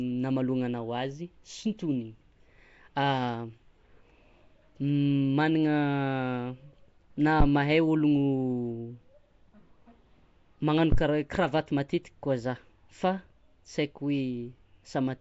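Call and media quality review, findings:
Nellymoser compression, throughout, 0 to end. Rough, hissy halo around speech with a smeared, underwater quality; codec damage plainly audible. Nothing above 7.7 kHz. Likely cause: Nellymoser Asao, Flash-era mic codec coding fixed blocks at a set bit depth per sample. Bands too weak to earn bits are replaced with noise, hence the hiss and smear. Band limit and texture fit a rate around 32 kbps.

Phantom power thump, 7.40 to 7.46 s, decays in about 14 ms, and 10.92 to 11.00 s, decays in about 18 ms. Two short thumps on the live input. Probable component: mic supply or phantom switching. A supply step on or off passes through the input coupling capacitors as a transient, dying away within tens of milliseconds here.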